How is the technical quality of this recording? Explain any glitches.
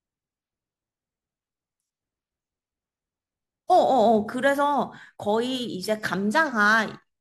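The recording is marred by one continuous fault. Sample clock jitter runs from start to finish: an unsteady converter clock, wandering by something like 3 microseconds, takes each sample slightly early or late, so steep parts of the speech waveform land at wrong values. The error, roughly 35 dB below the signal, is a grainy hiss that thickens on loud, bright syllables and disappears in the pauses.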